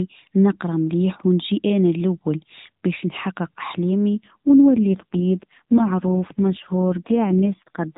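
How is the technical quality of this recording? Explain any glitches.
The speech comes through an AMR narrowband mobile link, so it's band-limited to 4 kHz with only light coding roughness at first, and then one clear glitch.

At 4.16 s, right after "الاول باش نحقق احلامنا", there's an AMR rate drop that lasts to the end. The codec steps down, which fits a switch from 12.2 to 4.75 kbps, and the voice turns buzzier and more synthetic, with no gap and no change in bandwidth.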